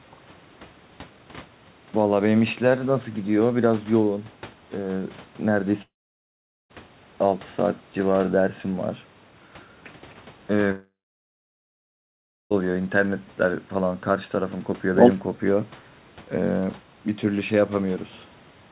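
At 5.82 s the speech breaks off for about 0.9 s, until 6.71 s, and again from 10.71 s to 12.52 s, about 1.8 s. Each is a long network dropout, likely from audio packets that never arrived. The receiver briefly stretches the last sound into a fading buzz, then holds near-silence, and the speech resumes with that stretch simply gone. Unlike a brief concealed packet loss, the fill dies away into quiet rather than bridging the gap.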